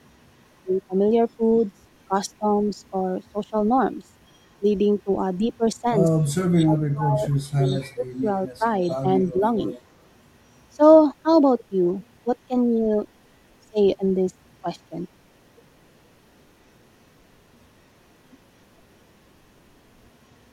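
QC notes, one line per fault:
1.58–1.65 s, 4.31–4.48 s, 6.22–6.68 s and 7.44–10.11 s: echo leak. A delayed copy of the speech returns 259 ms late. It is faint early and strongest in the last two. The likely cause is an echo canceller passing loudspeaker pickup back.
6.28–8.64 s and 9.31–9.42 s: speech suppressed in double talk. The speech dips in pieces, dropping by up to about 30 dB, and then briefly by about 10 dB. This is likely an echo canceller turning down its own talker along with the loudspeaker echo.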